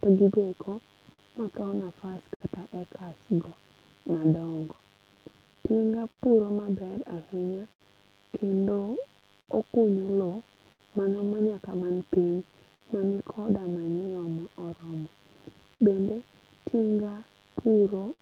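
From the first moment to the last, a steady, raspy mains buzz sits under the speech. Its base is 50 Hz, and its harmonics climb well up into the kilohertz range. It sits at about 35 dB below the speech. Such a buzz comes from sharp switching spikes, twice per mains cycle, leaking in through a dimmer, a rectifier or a missing shield. It never lets up.

Clock drift between sender and receiver also runs all the way through. The sender's audio clock runs slow, by roughly five percent. Audio therefore arrives more slowly than the receiver plays it. The receiver's jitter buffer keeps draining toward empty. To cope, the receiver must pad the stream again and again. The result is small timing hiccups that recur at uneven intervals.

Those repeated timing corrections can be heard from 0.90 s to 17.74 s. Each one adds a short piece of sound to keep the receiver in step. All of them push the same way, stretching rather than cutting. 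Together they add around 200 ms, so the stretch plays at about 99% speed. The edits are unevenly spaced. They come across as a faintly unsteady tempo, with the odd slight hiccup.

Scattered short gaps run from 1.13 s to 18.21 s. Around thirty small holes appear, one here and one there. These come from packets that were lost or arrived late. Each hole was patched by carrying the last sound forward. The longest patch lasts roughly 70 ms. Together they fill about 700 ms, around four percent of the span. They sound like brief ticks, smears and hiccups in the speech.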